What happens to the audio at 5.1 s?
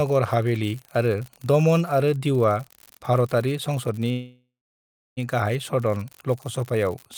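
At 5.1 s the speech is near the end of a call audio freeze that runs from 4.11 s to 5.19 s. It begins right after "आरो दीउआ भारतारि संसदनि". The last sound is stretched into a buzzy hiss that fades away. Then about 0.68 s of silence follows. The likely cause is packets held up in transit, so the jitter buffer ran dry. When they arrive, the speech resumes where it stopped. About 1.06 s of gap is inserted and nothing is lost. Everything after is delayed by that amount.

An unreliable data bit is also present here, as it is across the whole clip. One marginal data line flips its bit in a random share of samples. Each error adds a spike of the same size. The result is a steady crackle or fizz. It carries on through the silent stretch of the freeze too.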